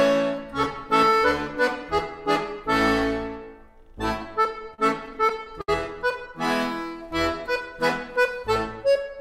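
From 4.43 to 5.69 s the audio shows repeated stalls, a stutter. Packets reached the receiver late or too slowly, so its jitter buffer kept running dry. Each time, the last sound was held and stretched until playback could continue. There are 13 such gaps across that stretch, the longest 68 ms, filling 213 ms in total, about 17 percent of the span. Nothing is lost. The sound drags and hiccups instead.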